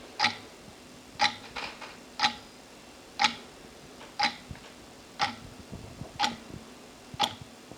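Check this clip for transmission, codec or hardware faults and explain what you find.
Nothing stood out on listening to the audio in this clip.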